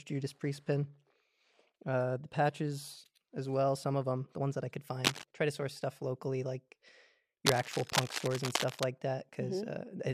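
Two bursts of scratchy, rustling cable scratch noise sit over the sound: a short one at 5.04 to 5.24 s, about as loud as the sound itself, and a longer, slightly quieter one from 7.46 to 8.85 s. The likely cause is a worn cable or connector being moved, its contact resistance jumping erratically.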